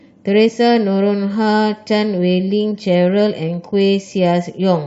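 At 0.48 to 0.50 s the speech is interrupted by a brief glitch, and at 2.71 s by a shorter blip, both signs of damaged data in a compressed stream. Corrupted bytes left the decoder misreading those frames and losing sync until it found a valid header again. On a spectrogram each shows as a thin vertical break cutting across the speech harmonics. The waveform shows an abrupt discontinuity or spiky burst at each point.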